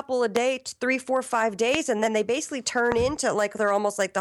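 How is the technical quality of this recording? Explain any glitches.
Three loud pops break up the speech. Loud pops occur at 0.36 s, just before "three four five"; at 1.75 s, between "three four five" and "and then they basically"; and at 2.92 s, right after "then they basically turn". Each lasts about 20 ms. They are likely caused by a sudden voltage pulse, from a connector, switch, static or driver glitch, that is added to the signal and shaped by the circuits after it. Each is heard as a single sharp pop about 20 dB above the speech, which continues underneath.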